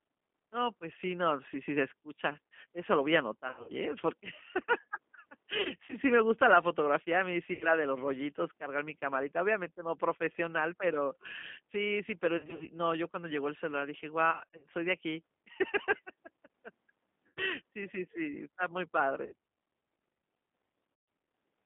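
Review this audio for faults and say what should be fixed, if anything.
The whole clip runs through the G.729 codec at 8 kbit/s, squeezed into roughly 200 Hz to 3.6 kHz. The speech is rebuilt from a vocal tract filter plus a few pulses per frame, so it sounds plainly rough and synthetic with no top end. To avoid this, negotiate a wideband codec like Opus or G.722 instead.

There's VoIP packet loss concealed by the speech codec at 3.48–3.72, 5.61–5.97 (right before "sí me gusta la"), 7.53–7.69, 12.37–12.66, 14.31–14.66, 17.27–17.42, 19.26–19.34 and 20.94–21.08 s. In each gap the decoder stretches its last pitch and filter into a fading buzz or coloured noise, in runs of up to 140 ms, and the speech stays weak briefly afterwards. Fixing this means improving the network path, for example with QoS or a better connection, or adding FEC and a proper jitter buffer.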